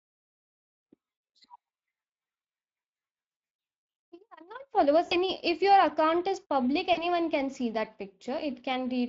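The Speex codec colours the whole clip. Its CELP coding runs short of bits for the excitation, so the speech has a hoarse, grainy, plainly noisy texture throughout, a level of damage that points to a mid-range bitrate of around 20 kbps. On a spectrogram the harmonic striations look fuzzy and broken up, with noise filling the gaps between them. The waveform keeps its normal envelope, but its fine structure is roughened.

VoIP packet loss concealed by the speech codec appears three times. From 3.31 to 3.51 s, about 120 ms of audio is missing, scattered across that 200 ms span in runs of up to 60 ms. The decoder stretches its last pitch and filter into a buzzy tone or coloured noise that fades, and the sound stays weak as it recovers. Brief repeats follow at 5.05 to 5.16 s (60 ms lost) and at 6.93 to 7.07 s (40 ms lost). On a spectrogram each one shows as flat, repeated harmonic bands fading in energy, and in the waveform as a dip in the envelope.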